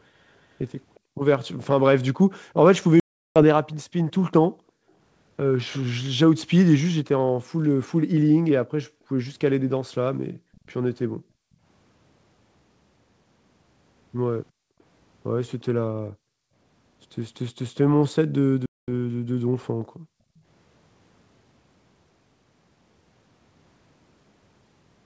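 At 0.95–1.0 s a faint repeat of the speech trails by 358 ms at about 35 dB down, likely an echo leak from a far-end loudspeaker; unlike reverberation, it is a discrete, delayed copy. It returns at 10.55–10.7 s and 14.81–15.64 s (about 40 dB down on the latter) and at 20.37–20.41 s.

Right after, at 1.0–1.18 s, the room background is gated by the echo canceller, dropping by up to about 40 dB and then recovering. Unlike a dropout, the speech itself stays intact. The same dip recurs at 4.5–4.95 s and repeatedly between 8.64 and 20.37 s, about 3 s in total.

At 3.00–3.43 s, 360 ms of packet loss on an ADPCM call leaves a hard-edged silence, and the speech returns slightly distorted as the predictor resynchronises. A second 220 ms loss at 18.66–18.89 s behaves the same way.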